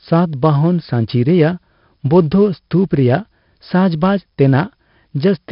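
A speech recording that has been through 4-bit ADPCM compression for its whole length, with heavy damage. Each sample is coded as a coarse 4-bit step from a running prediction, so the error rides along at a level tied to the speech itself: gritty hiss thickens on every loud syllable and sharp attacks smear where the step size lags behind. Nothing reaches above about 5.3 kHz, which points to a low sample rate of roughly 11 kHz and leaves the voice dull.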